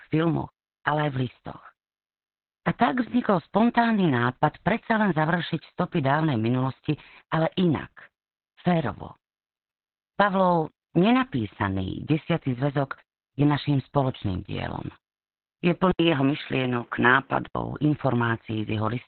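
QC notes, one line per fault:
Throughout, Opus voice compression: the speech sounds muffled, hoarse and slightly robotic. The sound points to Opus running its SILK linear-prediction coder in narrowband mode at a very low rate, around 8 kbps. The excitation is coded coarsely, which roughens the timbre and leaves heavy codec damage. On a spectrogram the energy stops flat at 4.2 kHz, with nothing above it. Within the band, harmonics look smeared in blocks that fit 20 ms frames.
15.91 to 17.55 s, input switched to a poorer device: the sound turns duller and narrower, then opens back up, most likely because the recording moved to a lower-grade microphone or a headset call profile and then returned. There is an 80 ms silence at the switch. The spectrogram ceiling drops to 3.8 kHz for this stretch, and a faint new noise floor appears far below the speech. The waveform shows the brief gap, but the overall level stays about the same.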